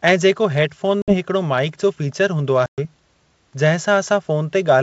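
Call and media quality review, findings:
Packet loss on ADPCM call, 1.02 s and 2.66 s: hard-edged silent gaps of about 60 ms and 120 ms, about 3 and 7 packets. Decoder predictor/step size desyncs, so speech returns slightly distorted until about 1.16 s and 2.86 s. Waveform: flatline with hard edges. Spectrogram: blank vertical band.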